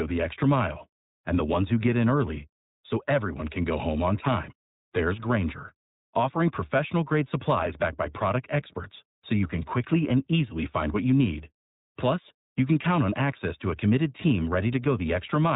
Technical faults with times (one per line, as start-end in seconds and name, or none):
0.00-15.56 iLBC codec